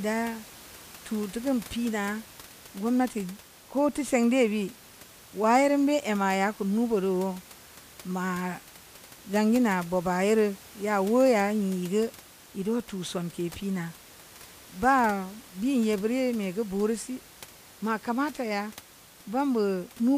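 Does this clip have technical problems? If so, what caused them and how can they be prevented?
No, there are no technical problems in this recording.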